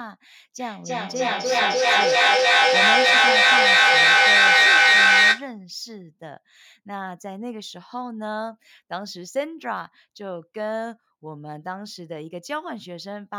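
From about 0.59 s to 5.57 s there's feedback echo between two devices. A second device in the room is replaying the call into the first one's mic, so each phrase returns roughly every 300 ms, and the loop builds to about 14 dB over the speech.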